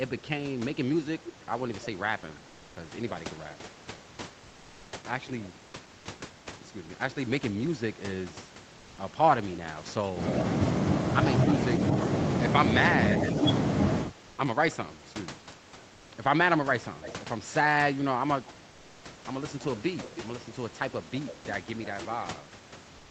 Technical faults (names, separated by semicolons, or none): echo leak; comfort noise in place of the background